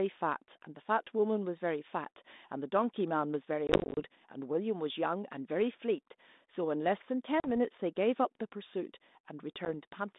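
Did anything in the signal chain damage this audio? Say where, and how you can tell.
Yes, at the network stage: packet loss on an ADPCM call. Hard-edged silent holes are scattered across 3.67 to 4.0 s, none longer than 30 ms, with a 40 ms drop at 7.4 to 7.48 s and a single drop at 9.65 s. Each resumes slightly distorted while the decoder's predictor and step size resynchronise.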